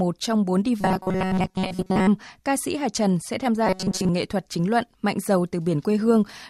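From 0.81 to 2.08 s, after "trong bốn" and before "ca sĩ", and again from 3.67 to 4.09 s, between "sẽ tham" and "nghệ thuật chính luận", the speech becomes a rigid metallic buzz fixed at 188 Hz: robotic sound from repeated short buffers. The likely cause is audio arriving too late, so a 5.3 ms stretch is replayed to fill the gaps while most of the real sound is skipped. The buzz is locked rather than wavering, unlike ordinary distortion.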